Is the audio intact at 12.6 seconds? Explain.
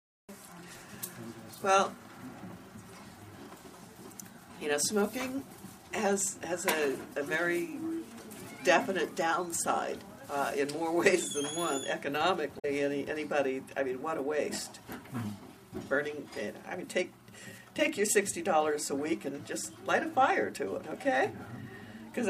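No. Damaged data in a compressed stream garbles 12.55 to 12.65 s: the decoder loses frame sync and searches for the next frame header, heard as a brief chirp, squawk, click or short hole.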